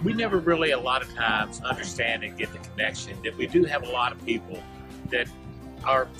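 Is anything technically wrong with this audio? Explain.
No, nothing technically wrong stands out in this audio. No fault is audible anywhere in the clip.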